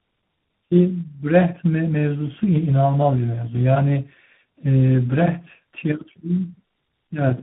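Tandem speech coding runs through the whole clip: the speech sounds as though it passed through two speech codecs in a row, which fits a low-rate 8 kbit/s coder followed by a 32 kbit/s ADPCM stage, with a plain telephone-rate link between them. The second coder re-encodes the first one's damage, so the voice is rougher and more warbly than any single codec would leave it. Nothing sounds above 3.8 kHz, but simple band-limiting would only muffle the speech without that compounded grit.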